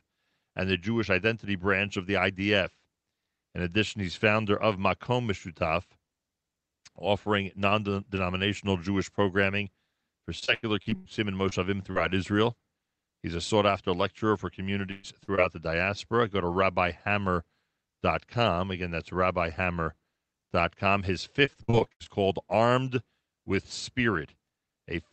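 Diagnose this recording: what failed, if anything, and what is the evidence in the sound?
Network packet loss hit the Opus call stream twice in sustained runs, at 10.39–11.07 s and 21.45–22.07 s. This is repeated packet loss, with roughly 40% of each stretch concealed and gaps up to 95 ms. The repeated continuation of the last sound makes those passages choppy, with pieces missing.

Isolated short concealed packet loss at the network stage left brief holes of 20–40 ms at 11.49–11.53 s, 11.91–11.97 s, 15.23–15.29 s and 15.35–15.39 s, just before "the diaspora". The decoder bridged each by extending the previous sound, heard as quick smears or wobbles.

A burst of packet loss at 14.91–15.05 s, right after "sought after lecturer for", removed about 120 ms of audio. The concealment held the last sound and let it fade across the gap, so a short buzzy or hissy stretch replaces the missing audio before playback resumes further on.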